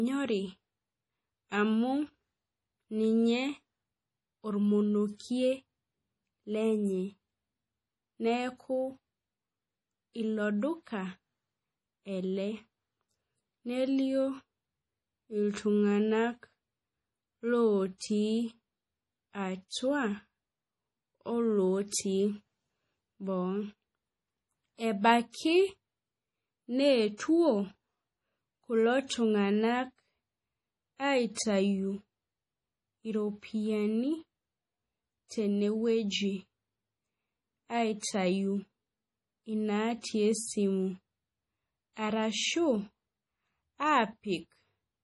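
From start to finish the speech carries a watery, swirling texture: the top end stops abruptly, s sounds turn into metallic chirps, and consonant onsets smear. This is likely heavy MP3 compression, which fits a bitrate near 32 kbps. Starved of bits, the encoder cuts the treble and drops quieter frequency lines that flicker from frame to frame. That flicker separates it from a plain low-pass filter, which dulls the sound without any swirl.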